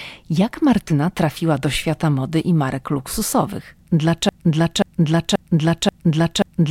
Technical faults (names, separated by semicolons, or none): broken-record loop